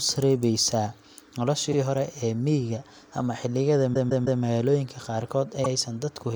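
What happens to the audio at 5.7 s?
Repeated frames occur from 5.63 to 5.68 s. A short run of compressed audio, about 52 ms long, which fits a pair of codec frames, was delivered twice, so the decoder plays that slice of speech and then plays it again. The result is a brief stutter. The duplicate adds 52 ms to the clip's running time.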